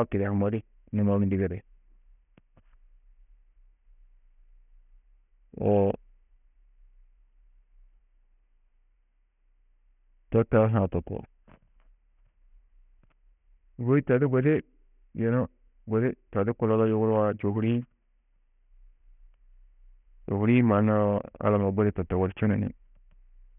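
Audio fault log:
Throughout, aliasing: the speech was resampled to what sounds like about 6 kHz with no low-pass filter first, so energy above the 3 kHz folding point reflects back down as unrelated tones, making sibilants gritty and metallic. The folded-back tones sit roughly 30 dB below the speech.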